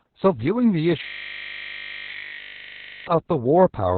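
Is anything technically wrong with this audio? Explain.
Yes, two faults. Throughout, heavy Opus voice compression: SILK narrowband coding, likely near 6 kbps, leaves muffled, hoarse, slightly robotic speech, with a spectrogram cut off sharply around 4 kHz. From 1.04 to 3.07 s, a system hang loop repeats one 20 ms buffer about a hundred times, producing a steady 50 Hz buzz and an identical repeating waveform tile.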